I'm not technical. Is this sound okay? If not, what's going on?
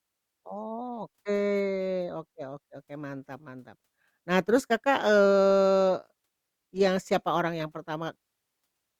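Yes, this sound is okay, and nothing is going wrong with it.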